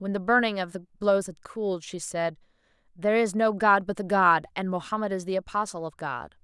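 No technical faults can be heard anywhere in this speech recording; the signal stays steady and intact for its whole duration.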